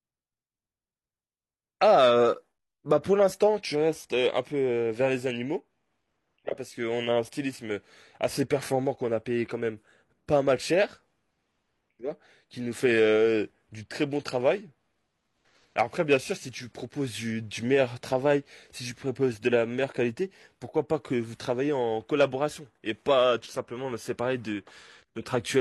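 At 2.58 s a gap between stream segments drops a hard-edged hole of about 12 ms into the speech. Two 6-second segments' timestamps fail to meet, so the player inserts silence. Unlike a dropout, nothing is missing; what follows simply arrives slightly late.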